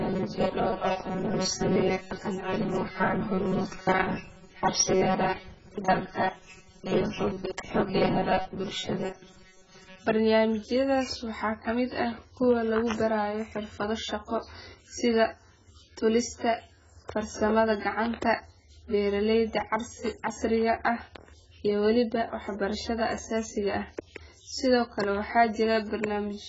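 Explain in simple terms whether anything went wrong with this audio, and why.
Two things went wrong. From 0.01 s to 10.05 s the speech takes on a stiff, metallic buzz at 188 Hz, which is robotic sound from repeated short buffers. Fresh audio seems to have arrived too slowly, so the software likely filled the gaps by replaying the last tiny slice, about 5 ms, over and over while roughly two-thirds or more of the real sound was skipped. Unlike a dropout, nothing goes silent.

The whole clip also sounds dull and smeared, with nothing above about 7.6 kHz and a warbly, fizzy edge on hissy sounds. That points to AAC compression at a very low quality setting, the likely cause being a codec that throws away detail it judges unimportant and heavily damages what remains. Unlike the buzz, this runs from start to finish and muffles the sound rather than giving it a fixed mechanical pitch.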